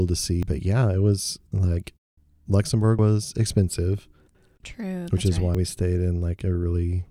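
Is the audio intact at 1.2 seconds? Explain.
Yes, the speech at 1.2 seconds plays through intact, with no dropout, click, distortion or other fault at that moment.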